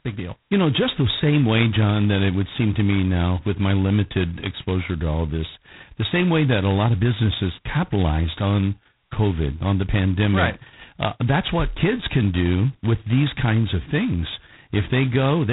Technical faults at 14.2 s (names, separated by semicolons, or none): G.726 ADPCM